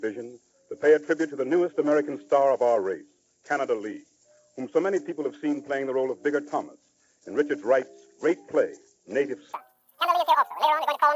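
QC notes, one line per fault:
9.53–11.16 s, wrong sample rate: the final stretch plays at double speed and a full octave (12 semitones) higher, consistent with samples captured at 16 kHz being clocked out at 32 kHz without conversion. Because timing and pitch scale together by the 2.0 ratio, the sound turns thin, chipmunk-like and rushed. On a spectrogram every component and harmonic jumps to twice its frequency at 9.53 s. The waveform shows events compressed to half their duration.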